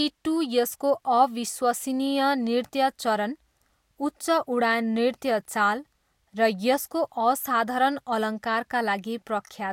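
No technical faults can be heard anywhere in the recording.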